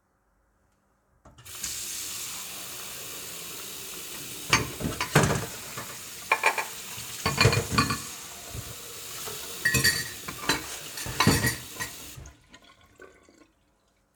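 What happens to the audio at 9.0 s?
At 9.0 s the sound is doubled. A doubled audio track runs from 5.29 s to 9.37 s. A second full-band copy trails the original by about a tenth of a second and sits a few decibels lower. It adds no decay or room colour, so it reads as a flat, stuttering repeat rather than an echo. It ends abruptly at 9.37 s. The likely cause is a second, slower capture path mixing the same audio back in.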